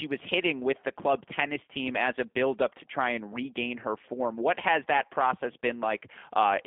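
From start to finish the speech carries G.729 codec damage: 8 kbit/s pulse-coded reconstruction leaves it rough and synthetic, band-limited to roughly 150 Hz to 3.5 kHz.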